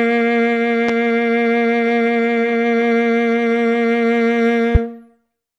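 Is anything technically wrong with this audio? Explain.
Yes. Two loud pops cut through the music, one at 0.89 to 0.92 s and a louder one at 4.75 to 4.78 s, peaking about 10 dB and about 15 dB above it while the music continues beneath. Each is likely a sudden voltage pulse from a plug, switch or static discharge, shaped by the downstream circuitry into a short thump.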